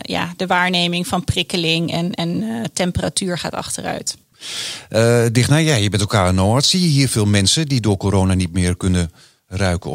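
No technical faults can be heard anywhere in the speech recording. There is nothing to place on a timeline or trace back to a cause.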